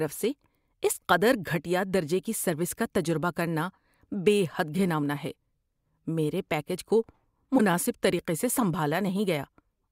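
At 7.57 to 7.60 s, between "میرے پیکیج کو" and "طریقے سے", the speech jumps ahead with a brief glitch lasting about one 24 ms frame. This is likely a broken MP3 bit reservoir: after dropped frames, the next frame reads borrowed bytes belonging to another frame.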